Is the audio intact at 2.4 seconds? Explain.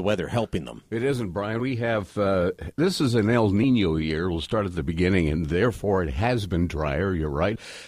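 Yes, at 2.4 seconds the speech plays through cleanly, with no dropout, click, distortion or other break at that moment.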